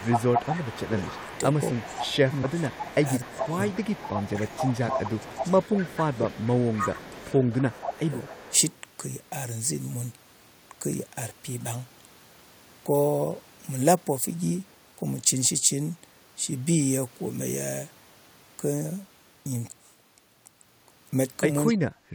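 From 0.04 to 8.72 s a fainter copy of the speech trails the original by about a quarter second (252 ms), roughly 10 dB below it. This is an echo leak, likely from a far-end speakerphone whose echo canceller let part of its microphone pickup return down the line. Over the same stretch the speech itself dips by up to about 15 dB in pieces, roughly 2 s in total between 0.0 and 3.57 s and about 3 s between 4.33 and 8.52 s. That is speech suppressed in double talk, likely because the canceller could not tell the talker from the echo while both were present and turned everything down. At 21.68 to 21.73 s a brief, much weaker echo scrap returns, about 20 dB down, again likely leaked echo. Overlapping it, from 21.71 to 21.83 s, the speech drops by about 25 dB for roughly a tenth of a second, likely the same double-talk suppression. In the last moment, 22.11 s to the end, the room sound falls away by about 15 dB for about 40 ms. 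This is background gated by the echo canceller, which clamped the microphone hard while the loudspeaker was playing.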